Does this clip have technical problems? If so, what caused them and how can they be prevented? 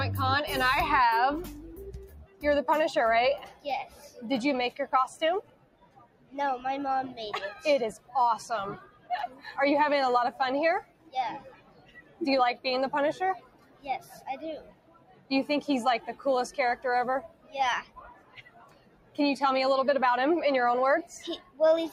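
Yes. A noise suppressor built for speech, applied to music or sounds, runs through the whole clip. It treats steady tones and ambience as noise, so the level pumps by roughly 15 dB while attacks slip through. Bypass speech-oriented suppression on non-speech material.

Sound cut by the noise suppressor shows up at 1.51–2.43, 3.4–6.35, 7.55–8.15, 8.77–9.51, 10.32–15.31, 15.99–19.19 and 21.03 s to the end. Sustained parts and tails sink by about 14 to 16 dB. Turning the suppressor off or switching to a music mode prevents it.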